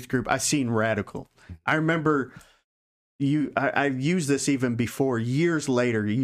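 There are no technical faults in this speech recording to describe, so there is nothing to place in time order.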